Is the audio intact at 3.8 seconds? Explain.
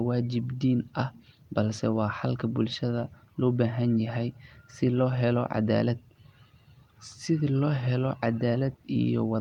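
Yes, the speech at 3.8 seconds is intact, with no fault present at that moment.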